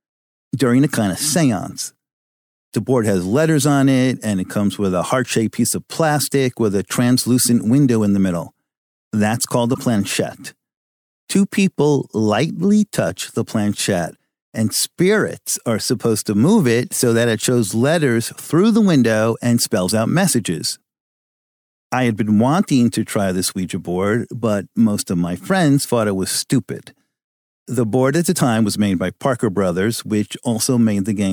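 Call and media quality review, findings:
Damaged data in a compressed stream, 9.71–9.78 s: brief glitch in the speech, about 70 ms. Component: decoder input. Corrupt bytes in the encoded stream cause misread or discarded frames; decoder loses sync, garbles output while hunting for the next valid frame header.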